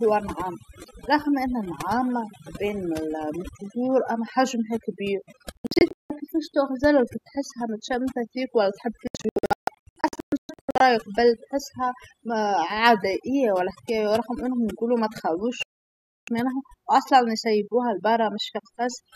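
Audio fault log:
throughout: overdone noise removal. The denoiser is set too hard, gating bands near its noise estimate, so the background drops and breaks up into twinkly specks.
0.01–8.66 s: train of clicks. About seventy clicks at an uneven 7.6 per second, peaking around 5 dB over the speech and ticking through pauses, likely from nearby equipment interference or a faulty connection.
5.57–6.10 s, 9.07–10.81 s, 15.63–16.28 s: digital broadcast dropout. The receiver mutes when frames fail and loses 360 ms, 1.13 s and 648 ms of audio, with the first two broken into scattered short holes.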